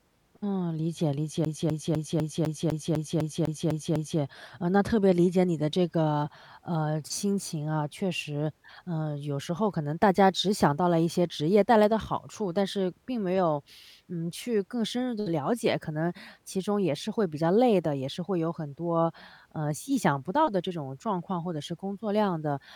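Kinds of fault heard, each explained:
CD stuck on one turn: A scratch keeps sending the laser back one track at the same point. The same 0.25 s slice of speech repeats eleven times from 1.45 s to 4.21 s. Each jump has a brief mute. The result is a fast, even stutter.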